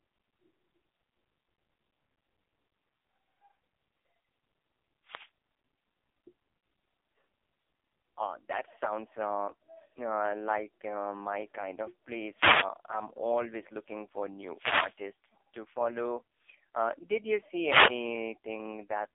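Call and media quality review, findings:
AMR narrowband mobile codec, throughout the clip. Speech confined to a telephone band of about 300 Hz to 3.6 kHz, nothing above 3.7 kHz. Heavy buzzy, synthetic voice texture. Probable component: AMR-NB encoder at its lowest modes. The buzz and dulled top fit roughly 5 kbps on an 8 kHz narrowband path. Too few bits to model the vocal tract and its pulse excitation faithfully.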